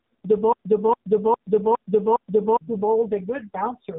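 Throughout the clip, the speech carries heavy AMR narrowband mobile codec damage. Nothing above 3.8 kHz survives, leaving a muffled, telephone-band sound, and the coarse vocal-tract modelling makes voicing buzzy and synthetic. That degree of damage fits one of the lowest AMR-NB modes, around 5 kbps.

From 0.53 s to 2.61 s, a broken-record loop takes over. A 0.41 s fragment repeats back to back five times, exactly identical each pass, and the speech that belonged in that span never plays. The likely cause is a stalled player, encoder or stream resending its last buffered fragment.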